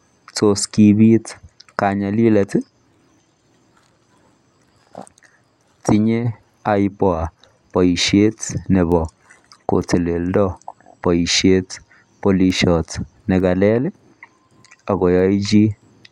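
From 0.84 s to 16.09 s, sharp, uneven ticks recur about once a second. These are word clock ticks: an unlocked receiving clock slips one sample each time.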